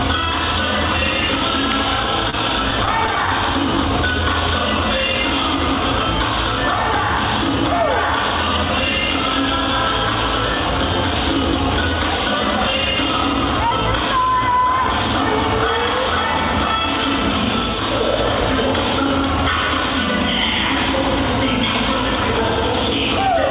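At 2.30 to 2.35 s a short stall from a late packet occurs: the jitter buffer ran dry, so the last sound is held about 27 ms, nothing lost. From 2.71 to 3.29 s repeated stalls (stutter) follow: five brief holds, none longer than 10 ms, totalling 45 ms, make the audio drag and stutter, over a band ending at 4 kHz that fits a narrowband call codec.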